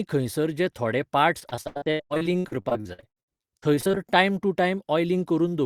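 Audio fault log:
1.39–3.98 s, repeated packet loss (robotic sound): between "खंयसर जे थोडे" and "टायम टू", gaps up to 90 ms keep getting patched by stretching the previous sound, so nearly half of that stretch comes out choppy, with pieces missing.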